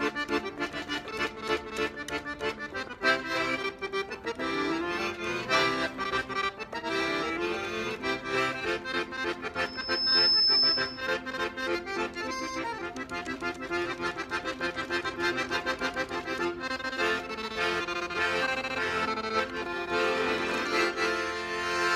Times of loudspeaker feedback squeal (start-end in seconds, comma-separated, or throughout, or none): 9.56-11.17